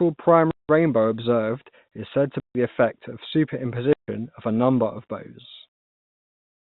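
Packet loss filled with silence cuts the speech at 0.51 to 0.69 s (180 ms, just before "observed is said to"), at 2.40 to 2.55 s (150 ms, just before "the effect of"), and at 3.93 to 4.08 s (150 ms, just before "of a number of"). The receiver substituted silence for the missing audio, leaving hard-edged gaps. The gap lengths point to 30 ms packets. Through the narrow G.711 telephone band, which carries nothing above 4 kHz, these dropouts stand out as abrupt holes.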